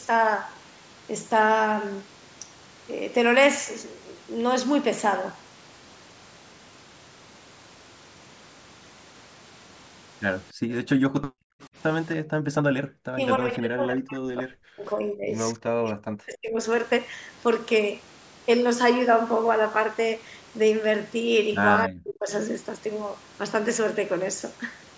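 A speech recording from a call in which the room background drops out sharply, by about 40 dB, at 10.53 to 10.69 s, 11.13 to 11.6 s and 12.17 to 12.54 s, because the echo canceller gated the microphone while the far end's loudspeaker played. Right after, at 11.62 to 11.67 s, a faint copy about 30 dB down arrives 284 ms late, most likely an echo leak where the canceller let some loudspeaker sound through. The talker's voice then sinks almost to silence in pieces from 13.12 to 15.36 s, 15.54 to 16.59 s and 21.85 to 22.3 s, likely speech suppressed in double talk, with the canceller turning down both its own talker and the loudspeaker echo while they overlapped. The call microphone processing shows in a spectrum that stops at 8 kHz.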